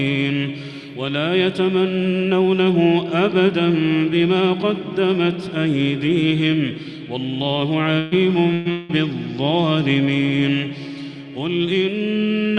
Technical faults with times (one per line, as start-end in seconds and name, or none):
7.99-8.14 burst of packet loss
8.53-8.68 burst of packet loss
8.71-8.92 long network dropout